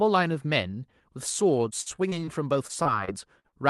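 Repeated packet loss (robotic sound) hits the speech from 1.81 to 2.29 s and again from 2.67 to 3.65 s. Each burst holds several short dropouts, up to 45 and 48 ms, bridged by extending the previous sound, so roughly a quarter, then a sixth, of each stretch turns choppy.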